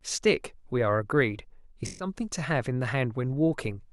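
From 1.86 to 2.07 s the speech goes through AAC frame loss with concealment. About 128 ms of coded audio never reached the decoder, a gap that fits roughly six frames, and the decoder bridged it by rebuilding each missing frame from the last spectrum it had received, with altered signs and estimated energy. The result is a fifth of a second where the speech turns blurred and hissy, a smeared, phasey stretch in place of clear detail.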